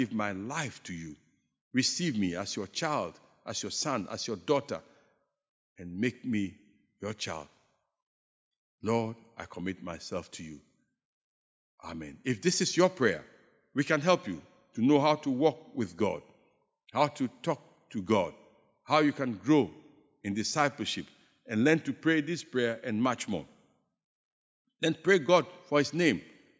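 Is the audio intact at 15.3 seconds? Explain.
Yes, the speech at 15.3 seconds is intact, with no audible fault at that moment.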